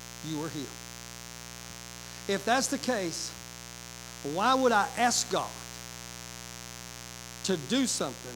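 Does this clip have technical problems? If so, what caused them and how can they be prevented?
Yes. Mains buzz runs throughout this speech clip: a steady, raspy buzz built on 60 Hz harmonics extending into several kHz, sitting about 15 dB below the speech. Sharp switching spikes, twice per mains cycle, are entering the signal path. Prevent it with shielded, properly grounded cabling kept away from dimmers and rectifiers.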